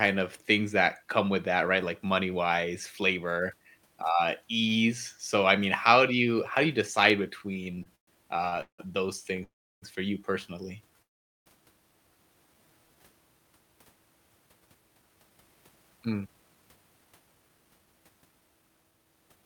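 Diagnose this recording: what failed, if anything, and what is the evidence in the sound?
The stage is the network and the receiver's jitter buffer. Between 7.53 and 8.80 s, just after "how do you decide", the audio shows repeated stalls (stutter). It halts 11 times, with the longest hold at 174 ms, and about 450 ms of continuation is spliced into that stretch, roughly a third of it. Packets were arriving late or more slowly than they were played, so the buffer kept running dry. The receiver extended the last sound each time. Nothing is lost, but the delivery drags and judders.

Two call audio freezes follow. In the first, from 9.44 to 9.84 s and ending just before "for you personally", the sound carries on briefly and then drops out, with 384 ms inserted and about 330 ms of it silent. In the second, from 11.02 to 11.48 s and starting right after "for you personally", 437 ms is inserted and nearly all of it, about 430 ms, is silent. 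The likely cause is packets held up in transit, which left the buffer empty until they arrived. Playback then resumes where it stopped, so each freeze adds delay without removing any content.

A jitter buffer slow-down runs from 12.46 to 13.01 s. The buffer rebuilds its reserve by repeating single pitch periods and slivers of pause. This adds 88 ms and drops the playback rate to about 85% with the pitch unchanged. Over roughly half a second, sounds are audibly drawn out, with a slight elongated quality as the same periods recur back to back.

From 14.32 s to 19.43 s there is a jitter buffer speed-up. The buffer held more audio than its target, probably after delayed packets arrived in a burst, so it trimmed short runs of pitch periods continuously. Playback runs at about 113% of normal speed with the pitch preserved. Roughly 0.7 s of audio is cut over those five seconds, and the delivery sounds hurried and clipped in its rhythm.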